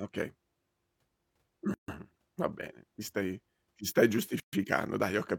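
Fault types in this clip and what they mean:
Gap at a join of encoded pieces: the speech was encoded as separate pieces and joined untrimmed, so each join keeps the encoder's start-up delay and final-frame padding as silence. Two dropouts open mid-phrase, 143 ms at 1.74 s and 131 ms at 4.40 s, just after "ti stai ti stai". Speech then resumes where it stopped. On a waveform they are flat stretches with smeared edges. A spectrogram shows blank vertical bands across all frequencies.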